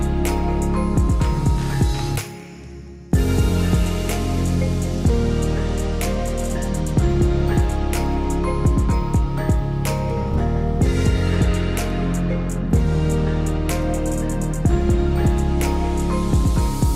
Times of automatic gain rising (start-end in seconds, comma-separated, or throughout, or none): none